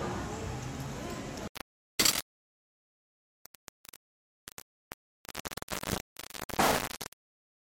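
From 1.48 s to the end, the sound turns harsh and grainy, which points to low bit depth without dither, likely about 3 bits with plain rounding. With only eight available levels, the rounding error tracks the signal and is roughly as loud as the sound itself. Quiet passages crackle or drop to silence. The waveform shows a coarse staircase, and the spectrogram shows broadband grit that rises and falls with the sound.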